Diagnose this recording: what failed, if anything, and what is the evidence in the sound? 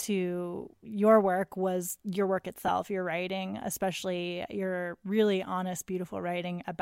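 Codec stage, lost LE Audio frames: at 2.67 s, between "work was your work" and "your writing especially your", about 15 ms of speech becomes a brief noisy smear, which fits two lost 7.5 ms frames. The LC3 decoder filled the gap by repeating the last spectrum with randomised signs. On a spectrogram, the harmonic stripes blur into a narrow vertical patch of noise. The waveform shows a short stretch of incoherent, phase-scrambled samples.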